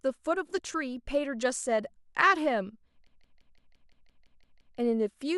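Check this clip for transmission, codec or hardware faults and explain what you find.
One hardware fault is present. From 3.07 to 4.78 s there is a system hang loop. The computer or driver froze while the device replayed one 171 ms stretch of speech, fitting an 8192-sample buffer. It stutters like a machine gun, about six times per second.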